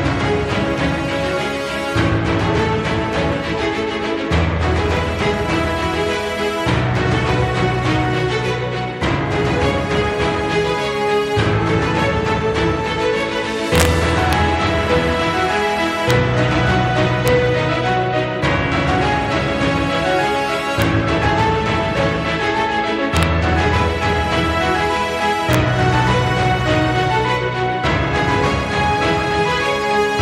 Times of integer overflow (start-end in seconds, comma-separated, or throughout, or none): 13.75-13.85, 14.33, 16.10, 17.28, 20.82, 23.17-23.23, 25.53